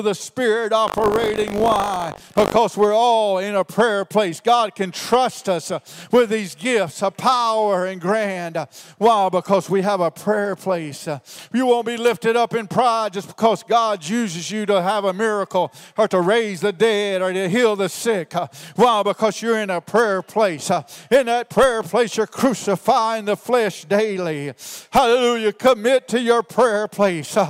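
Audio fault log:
0.86–2.58 s buffer tearing: a robotic 50 Hz rattle. About a tenth of each 20 ms period replays audio roughly 70 ms old, with hard joins.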